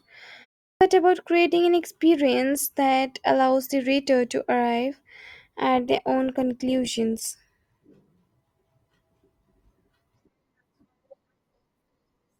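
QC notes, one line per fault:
0.69 s, clipped start after a pause: "about creating an experience" begins abruptly, its first 119 ms swallowed, as the output device wakes from sleep after a 0.32 s silence.
5.75 s to end, adaptive stream at a lower bitrate: the quality suddenly drops and codec artefacts rise with no gap, which fits a switch from Opus 64 kbit/s to 24 kbit/s.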